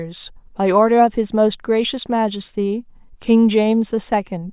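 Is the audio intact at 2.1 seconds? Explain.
Yes, the audio is intact at 2.1 seconds, with no audible fault at that moment.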